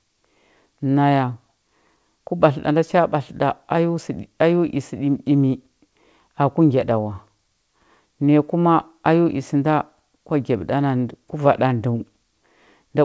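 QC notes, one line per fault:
No faults found; the speech comes through a G.722 call path at 64 kbps, with nothing above 8 kHz as that codec's band limit sets.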